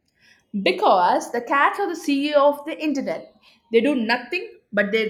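The left and right channels of this speech recording are running on separate, mismatched clocks, off by a couple of hundred parts per million. As a result, the channels drift apart, sliding to roughly half a millisecond offset by the end. Summed to mono, comb notches sweep slowly, producing slow flanging throughout.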